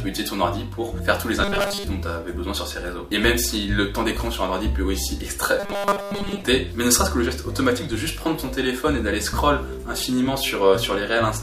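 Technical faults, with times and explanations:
1.44–1.84 s: robotic sound from repeated short buffers. A rigid metallic buzz at 200 Hz replaces most of the sound, likely from a 5 ms fragment looped while input stalled.
5.60–6.42 s: robotic sound from repeated short buffers. The same 200 Hz buzz returns for about 0.8 s, likely the same 5 ms repeat standing in for most of the missing audio.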